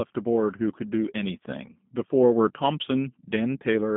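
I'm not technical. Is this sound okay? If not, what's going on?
No. The whole clip has been through the G.729 codec, a low-data compression scheme built for internet phone calls, and the damage is plainly audible from start to finish. Instead of storing the speech itself, it sends a rough description of how the voice is being shaped and rebuilds it at the other end, so the result sounds slightly rough and synthetic. It also keeps only the range between about 150 Hz and 3.6 kHz, so the speech sounds muffled and thin, like a phone line.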